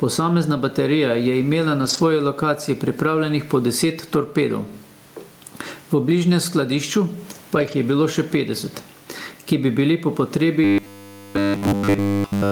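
Throughout the speech the level breathes: the faint room noise sits about 39 dB below the talking, and the gain swings by roughly 10 dB, leaving the delivery squashed. That is gain pumping, most likely from input gain set far too high with a fast limiter pulling it back on every peak. From 1.81 to 1.99 s and again from 7.55 to 7.73 s the sound turns briefly rough and grainy without any dropout. Each is a lost packet rebuilt from error correction: packets went missing, and the decoder filled about 100 ms from the low-bitrate backup copies carried in the following packets. From 10.64 s to the end at 12.51 s the speech collapses into a rigid, metallic buzz locked at 100 Hz that only loosely tracks the syllables. This is robotic sound from repeated short buffers, which fits a 10 ms block being replayed while essentially all of the fresh audio is skipped, likely because new data arrived too seldom.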